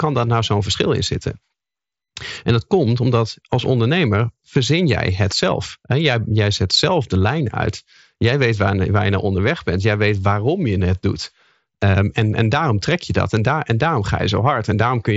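No technical faults occur anywhere in the speech, which comes through a Bluetooth mSBC headset link that carries nothing above about 7.7 kHz.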